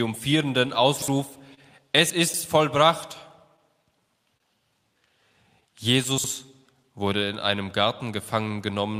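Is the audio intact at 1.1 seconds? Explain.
No. At 1.1 seconds the audio is not intact.

The clip carries clock drift between sender and receiver throughout. The sender's clock runs about 2 percent slower than the receiver's. The jitter buffer keeps draining, so the receiver repeats short pieces to keep up and can briefly run dry. This causes small timing hiccups at uneven intervals, and 1.1 seconds falls within that pattern.

The moment also sits inside a stretch of scattered short gaps from 0.31 to 1.60 s. About four small pieces went missing or arrived late there. The longest was roughly 30 ms. The receiver covered each one by extending the last sound. The fill totals about 50 ms, only a small share of the span. It is heard as brief ticks, smears or hiccups in otherwise clear sound.

Just before the moment, chunks out of order occupy 0.96 to 1.08 s. A 60 ms chunk arrived one chunk late and played after the chunk meant to follow it. 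Nothing is lost, but the order is scrambled. The three hard joins this creates give a short jumbled burst, ending only 20 ms before 1.1 seconds.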